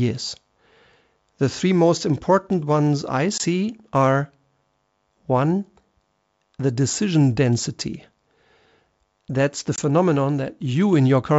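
A speech clip on a wideband call, sounding like full-rate G.722, suffers packet loss on an ADPCM call: a single packet drops at 3.38 to 3.41 s and again at 9.76 to 9.79 s, leaving a hard-edged 20 ms gap of silence. The receiver's adaptive predictor and step size then disagree with the sender's, so the speech comes back briefly with slight distortion before settling.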